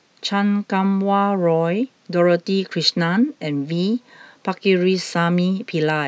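Nothing goes wrong anywhere in this speech recording, so there's no fault to place on the timeline.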